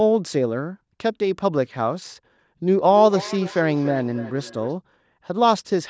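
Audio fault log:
2.75–4.76 s, feedback echo between two devices: the speech returns as distinct, evenly spaced copies roughly every third of a second, peaking about 15 dB below the original. A second device replays the audio into the microphone, and the local echo canceller cannot remove it. Room reverb would be a smooth smear rather than separate repeats.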